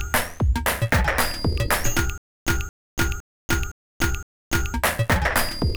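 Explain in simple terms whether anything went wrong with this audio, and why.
From 2.18 to 4.74 s, the same quarter-second scrap of sound (about 224 ms) plays five times, each followed by about 288 ms of dead silence. This stutter with silent gaps likely means playback stalled and kept replaying its last fragment, so the real audio there is lost.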